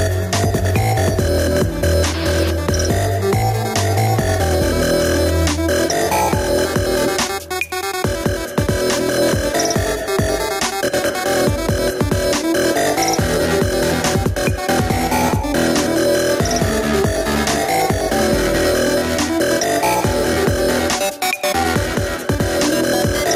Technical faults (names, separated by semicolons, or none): gain pumping